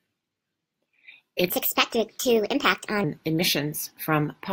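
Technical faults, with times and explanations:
1.49–3.04 s: section at the wrong speed. The speech jumps to 1.31 times normal pace and sits roughly five semitones higher, so it comes out squeaky and hurried before snapping back. Pitch and speed shift together, likely from being played against the wrong clock.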